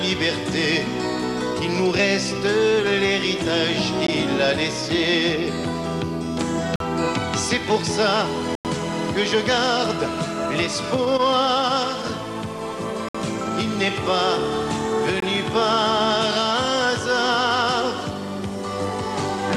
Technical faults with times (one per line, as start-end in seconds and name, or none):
4.07 Bluetooth stall
6.76-6.80 Bluetooth stall
8.55-8.65 Bluetooth stall
13.09-13.15 Bluetooth stall
15.20 Bluetooth stall